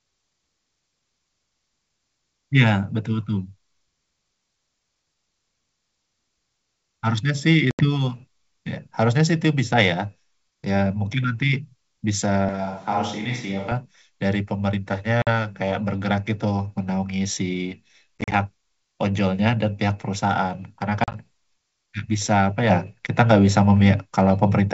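A speech recording over a wideband call, where G.722 coding keeps the voice clear up to about 7 kHz and its full-rate character comes through. The faults are packet loss on an ADPCM call and a switch to a distant microphone. Packet loss strikes four times. At 7.71 to 7.85 s about 80 ms is lost, and at 15.22 to 15.28 s about 50 ms. At 18.21 to 18.34 s, 70 ms is lost in scattered gaps over 140 ms, the longest 40 ms. At 21.04 to 21.16 s, 60 ms is lost across 100 ms, again with a 40 ms longest gap. Each hole is dead silence with vertical edges on the waveform and a blank column on a spectrogram. Then the decoder's predictor and step size, no longer matching the sender's, bring the speech back slightly distorted, and it settles within tens of milliseconds. From 12.49 to 13.72 s the voice suddenly turns roomy and hollow, thinner in the bass and about 5 dB quieter. Background noise rises to roughly 30 dB below the speech, a raised noise floor between words on a spectrogram, with abrupt boundaries at both ends. 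The likely cause is the close microphone dropping out and a more distant one being used.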